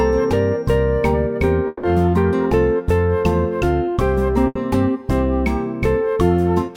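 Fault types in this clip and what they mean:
Long network dropout: From 1.67 to 1.86 s the last sound is held and stretched for about 160 ms, then the audio resumes with that stretch gone. This is likely a longer network interruption, and the longer concealed gap sets it apart from the packet-loss burst.
Burst of packet loss: At 4.47 to 4.58 s the receiver fills an 80 ms hole by continuing and fading the preceding sound before playback picks up further on. It is shorter than the dropout, so the concealment is brief.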